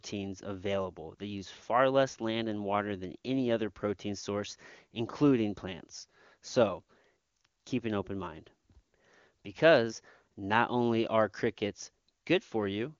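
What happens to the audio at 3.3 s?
Nothing goes wrong at 3.3 s; the speech passes through the AMR wideband (HD Voice) path intact there, with no audible fault at that moment.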